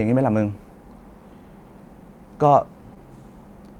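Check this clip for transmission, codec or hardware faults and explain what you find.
One transmission fault shows up, a short concealed packet loss between 2.95 and 2.98 s. It sounds like a brief smear or wobble in the speech, where the sound momentarily blurs before settling back. About 20 ms of audio never arrived in time, and the receiver papered over roughly 16 ms of that gap by extending the preceding sound, following its pitch or shaping noise, then crossfading back into the real signal.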